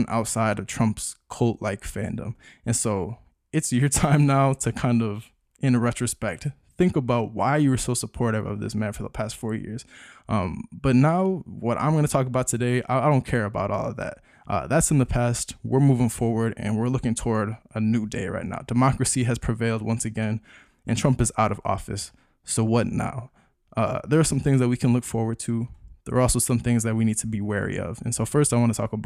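No technical faults can be heard anywhere in this speech recording. Nothing drops out, breaks up or is cut off at any point.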